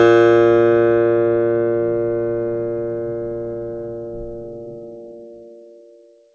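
No faults in this music clip; it carries the band limit of a wideband call path, with nothing above 8 kHz, which fits a G.722 codec at 64 kbps.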